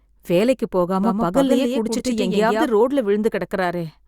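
From 1.04 s to 2.68 s the speech carries a doubled audio track: a second, full-band copy trails the original by roughly 150 ms at around 5 dB lower, likely because the same signal is reaching the mix twice through paths of different latency. Unlike a room echo or reverb, the trailing copy has no decay tail and no added room colour, and it switches on and off abruptly at those two points.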